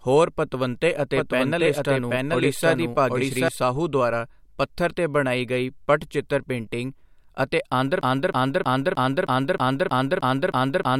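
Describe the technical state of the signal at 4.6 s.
At 4.6 s the speech signal is intact, with no fault to be heard at that moment.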